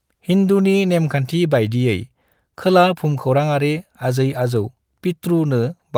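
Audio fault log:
No fault can be heard anywhere in this speech recording. There is nothing to log against any time or range.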